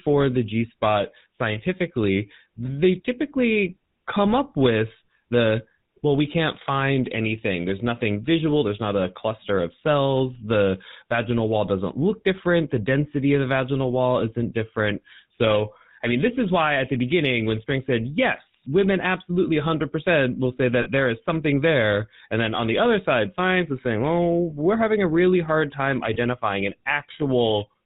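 GSM full-rate codec, throughout: the speech is rebuilt from a vocal-tract model driven by regular pulses, nothing above 4 kHz, giving plainly audible buzzy, gravelly roughness.

Lost GSM frames at 20.82–20.88 s, 24.50–24.54 s and 26.14–26.18 s: the decoder repeats the last good frame, a brief rough metallic ring, about 40 ms first, then 20 ms each.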